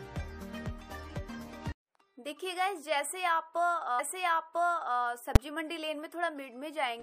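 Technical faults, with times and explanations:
3.98 to 4.98 s, stream segment repeated: About one second of audio plays a second time. A small blip marks the jump back. The player fetched or queued the same segment twice, so that stretch is heard again and the clip runs about 1.0 s longer.
5.36 s, invalid numbers at full scale: A single loud bang. A calculation produced infinite or invalid values, and the output was forced to the largest positive or negative value. The block lasts only about 5.8 ms, which fits a 256-sample block, so the two edges merge into one bang.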